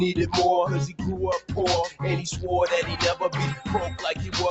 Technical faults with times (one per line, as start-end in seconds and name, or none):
0.00-4.50 noise suppressor applied to music or sounds